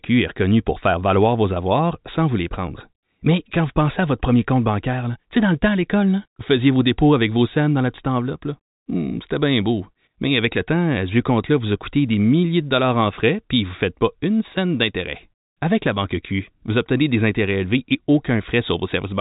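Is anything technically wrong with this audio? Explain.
No, nothing technically wrong stood out on listening to this speech.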